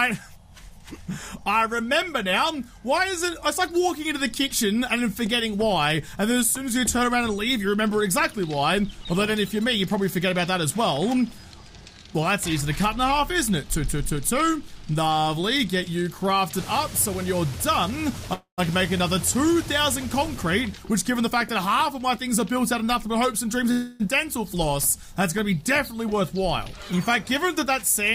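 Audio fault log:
18.33–18.60 s, call audio freeze: the sound stalls for about 0.26 s. The last instant is stretched into a fading buzz that ends in roughly 0.1 s of silence, then the audio resumes where it stopped, with nothing lost and about 0.24 s of added delay. The likely cause is delayed packets draining the jitter buffer. On a spectrogram, the final spectral slice smears horizontally, dims, and leaves a blank strip. The waveform shows a decaying repetitive pattern that flattens out.
20.46–23.71 s, jitter buffer speed-up: the sound runs at about 107% speed with unchanged pitch, so it feels hurried. The receiver trimmed pitch-period-sized pieces, roughly 0.2 s in total, to shed excess buffered delay. On a spectrogram, features compress in time while harmonic spacing stays fixed. The waveform shows repeated small splices.
23.71–24.02 s, call audio freeze: a second stall of about 0.3 s follows directly after the speed-up. 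This time the whole gap is filled with a fading buzz, with no silence before the audio continues intact, about 0.28 s later. It is likely another buffer underrun. The spectrogram shows a smeared, dimming band, and the waveform shows repeated cycles that shrink steadily.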